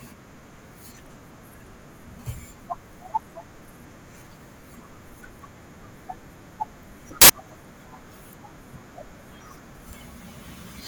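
A short burst of loud, harsh broadband noise cuts through the speech from 7.22 to 7.30 s, about 80 ms. It is samples built from the wrong bytes: each sample was assembled misaligned or byte-swapped, so the rapidly changing low-order bits became the dominant part of every value.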